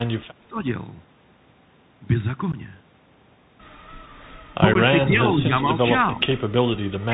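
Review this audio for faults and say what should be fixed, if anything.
The whole recording passed through a Bluetooth CVSD headset codec. This narrowband link encodes the signal one bit at a time, each bit only saying up or down, with an adapting step size. Nothing above 4 kHz survives, so the speech sounds boxed-in. Loud, bright passages outrun the step size and distort, sibilants come out scratchy, and a granular hiss sits under the speech throughout. Prevention: use a wideband headset profile (mSBC or LC3) instead of CVSD.

Unconcealed Bluetooth headset packet loss occurs at 2.52 s and 4.74 s. In each case about 15 ms of audio between headset and phone never arrived, which fits roughly two lost packets, and nothing was synthesised to cover the gap. The speech breaks into a short hole with hard edges, and on this CVSD link the level comes back slightly low for a moment afterwards. Prevention: reduce radio interference and enable packet loss concealment in the headset path.

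An echo leak appears from 5.03 to 5.08 s and from 6.12 to 6.25 s. The far end is likely playing the call over a loudspeaker, and its echo canceller let part of the pickup through. That residue returns as a faint, delayed copy of the speech about 383 ms behind the original. It sits about 15 dB below the speech in the first instance and about 20 dB below in the second, and it is heard as brief scraps. Prevention: improve the far end's echo cancellation or have that side use a headset.

Speech suppressed in double talk appears at 0.41 to 0.57 s, 5.1 to 5.5 s, 6.16 to 6.21 s, and from 7.09 s to the end. The echo canceller likely mistook simultaneous talk for echo and attenuated the near speech. The level dips by about 15 dB in the first stretch, about 5 dB in the middle two, and about 10 dB at the end. The cuts are short, each lasting a fraction of a second. Prevention: tune the echo canceller's double-talk detection so it does not duck the local talker.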